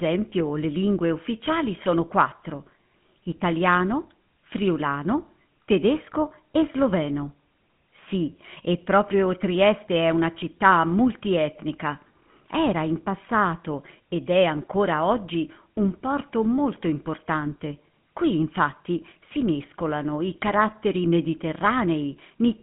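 Speech that's been through a GSM full-rate codec for the whole clip. The telltale sign is that buzzy, gravelly roughness, and it's plainly audible. The coder rebuilds the voice from a vocal-tract model fed by a coarse, regularly spaced pulse excitation, which fits the old 13 kbps full-rate scheme. There's also a phone-line band of roughly 150 Hz to 3.4 kHz, with nothing at all above 3.8 kHz, so it sounds thin and muffled up top.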